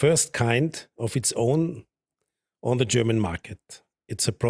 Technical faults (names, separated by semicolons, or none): none